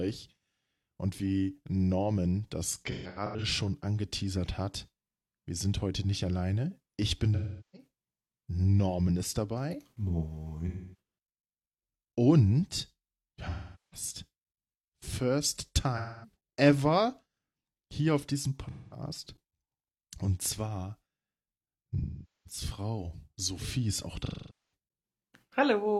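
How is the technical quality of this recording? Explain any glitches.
The speech is repeatedly broken by dropouts. AAC frame loss with concealment occurs at 2.87–3.44, 7.35–7.87, 10.67–10.98, 13.49–14.07, 15.96–16.36, 18.70–19.02, 21.98–22.60 and 24.25–24.74 s. Lost AAC frames force the decoder to guess from the last good spectrum, so each patch, 0.21 to 0.47 s long, turns smeared, noisy or phasey. The first is scattered, with runs of roughly 150 ms at most.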